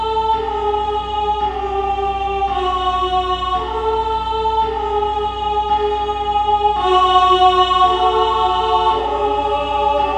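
Mains hum runs through the whole clip: a ground loop or nearby transformer leaks the 60 Hz power line into the signal, a steady low drone roughly 15 dB below the sound.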